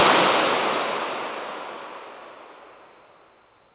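No technical faults are audible.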